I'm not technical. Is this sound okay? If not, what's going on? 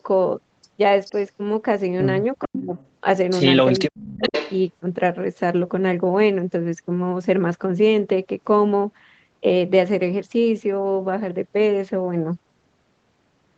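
No. Between 2.4 and 4.6 seconds, a delayed copy of the speech returns, about 0.43 seconds late. This is likely an echo leak from a loudspeaker. It is heard at 2.4 to 2.6, 2.77 to 2.88, 3.72 to 3.79 and 4.19 to 4.57 seconds.

From 2.47 to 2.71 and from 3.76 to 4.33 seconds, the speech drops in pieces, almost to silence. This is likely speech suppressed in double talk, with the echo canceller turning down both the talker's voice and the loudspeaker echo.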